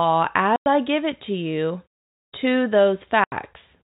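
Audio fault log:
0.56–0.66 s and 3.24–3.32 s: packet loss filled with silence. The sound cuts to dead silence for 100 ms just before "I give it to" and for 80 ms just after "it to you to", with hard edges. Both gaps fit whole 20 ms packets lost and replaced by nothing.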